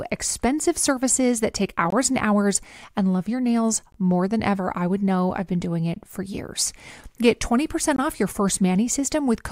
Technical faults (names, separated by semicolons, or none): gap between chunks